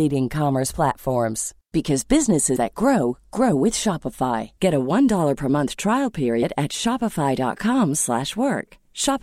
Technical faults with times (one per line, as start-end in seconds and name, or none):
2.55 compressed frames skipped
4.56 compressed frames skipped
6.42 compressed frames skipped